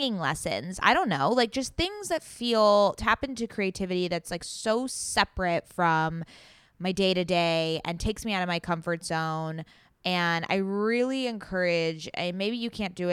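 No technical faults can be heard anywhere in the recording.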